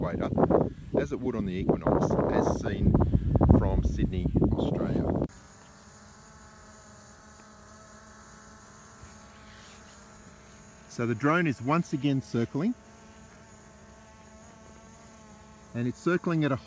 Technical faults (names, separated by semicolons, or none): none